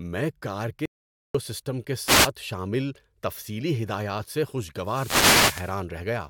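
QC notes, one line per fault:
0.86–1.35 s, audio dropout to silence: right after "میں کار" the speech stops dead and the line falls to silence, with no room tone underneath, until it resumes at "سسٹم کے". About 0.49 s of speech is simply missing. The cause is likely a momentary loss of input, such as a disconnected device, a failed link or a brief mute, while the recorder kept writing silence.
2.05–2.29 s and 4.80–5.83 s, wireless microphone noise hit: a swish of static rises over the voice, first just after "سسٹم کے" for about a quarter second, then after "تفصیلی ہدایات سے" for about a second. Reflections of the FM microphone's radio signal cancel each other, so signal strength drops and receiver noise rises.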